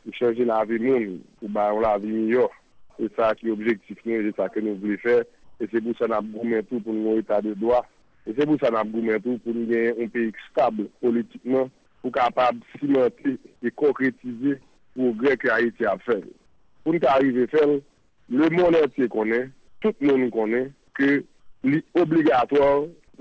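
At 2.72, 5.44, 8.02, 11.86, 14.78, 16.46 to 18.28, 19.68 and 21.40 s, brief pauses turn flat, featureless and up to about 6 dB quieter, likely comfort noise in place of the background from discontinuous transmission, under a call codec with nothing above 8 kHz.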